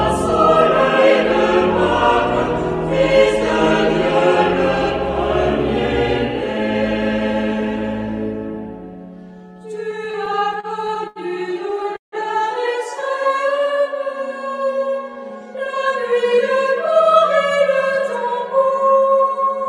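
Repeated stalls (stutter) run from 9.91 to 11.19 s: the audio halts eleven times, with about 221 ms of held-over sound in total and the longest hold lasting 80 ms, so roughly a sixth of that stretch is concealment. Packets were arriving late or more slowly than playback, and each time the jitter buffer ran dry the receiver extended the last sound, fading it during longer waits, so the audio drags without losing anything. A short stall from a late packet follows at 11.83 to 11.87 s, where one packet missed its slot and the receiver stretched the preceding sound by about 18 ms, giving a brief held moment with a slight buzz or dip before resuming from the same point. A call audio freeze sits at 11.96 to 12.15 s: the sound turns into a decaying continuation and then about 140 ms of silence, 160 ms of inserted time in all. It likely comes from packets held up in transit emptying the jitter buffer, after which playback picks up where it stopped. 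A jitter buffer speed-up covers 15.30 to 18.71 s, where the audio plays at 104% speed with unchanged pitch. Too much audio had built up in the buffer, so the receiver trimmed many pitch-period-sized slices, around 150 ms in total, to reduce the delay.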